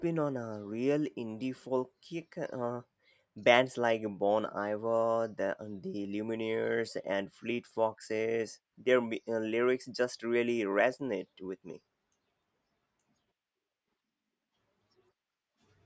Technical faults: none

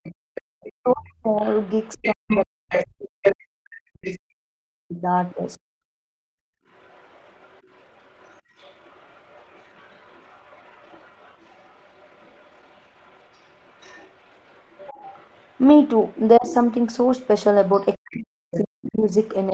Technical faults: other side's voice leaking through; speech suppressed in double talk

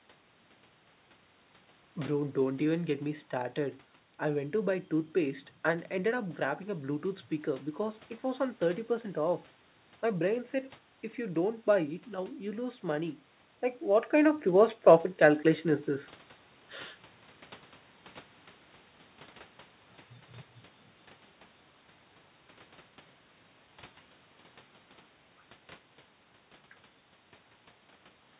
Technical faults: none

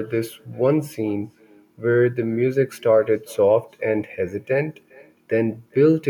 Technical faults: echo with no canceller

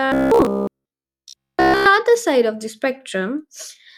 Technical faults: robotic sound from repeated short buffers

